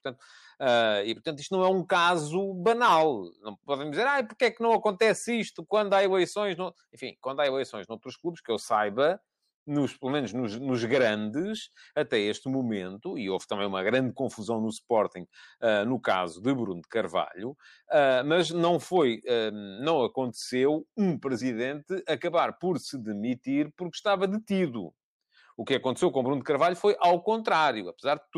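No technical faults are audible anywhere in the speech.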